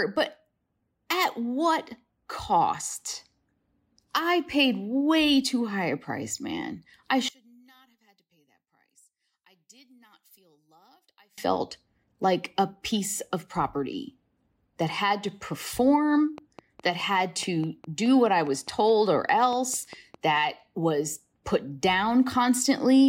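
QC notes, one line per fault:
7.29–11.38 s, one channel inverted: after "a price man I" the speech drops about 36 dB in mono, leaving a faint residue, not true silence, likely from reversed polarity.
16.38–20.37 s, train of clicks: between "that had to perform" and "was put", about twenty similar clicks at a steady 4.77 per second peak near speech level, a regular ticking unlike random crackle, likely from interference.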